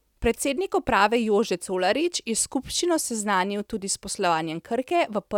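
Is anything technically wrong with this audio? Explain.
No, nothing is technically wrong with this audio.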